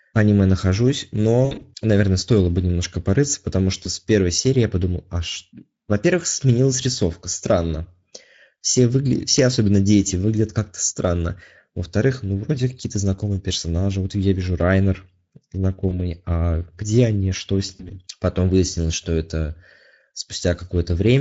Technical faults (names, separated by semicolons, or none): Speex codec; VoIP packet loss concealed by the speech codec